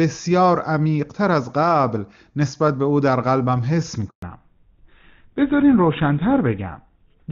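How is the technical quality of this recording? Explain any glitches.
The recording has two faults, both around the same moment, and the second lasts to the end.

At 4.08 s the speech dies away and stays silent until 4.22 s, a gap of 140 ms. This is a handover gap: the phone passed the call from one network to another, and no speech frames reached the receiver while the switch was under way. The sound fades within a few tens of milliseconds and nothing fills the gap, so whatever was said during it is gone.

From 4.22 s to the end, the speech turns duller and rougher, with all content above 4 kHz missing. This is a fallback to narrowband. Before the handover, the clear, full sound of the opening section fits the AMR wideband (HD Voice) codec at a high rate, around 23.85 kbit/s. After it, the call lands on an older narrowband codec, GSM full rate, which cannot carry anything above 4 kHz and codes what remains more coarsely.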